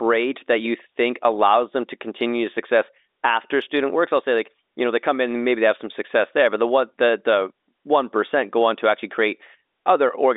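No technical faults are audible.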